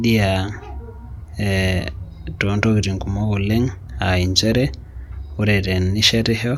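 No technical faults can be heard anywhere in the speech. There is nothing to place on a timeline, and no moment in the recording calls for comment.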